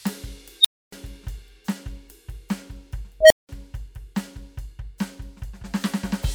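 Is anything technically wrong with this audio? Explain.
Yes, the music has two unstable filter events. A recursive filter with bad coefficients runs away: at 0.61–0.92 s, a tone around 4 kHz swells within 41 ms, clips, then drops to 0.28 s of silence. At 3.20–3.49 s, a tone around 700 Hz builds over 98 ms, followed by 0.19 s of silence.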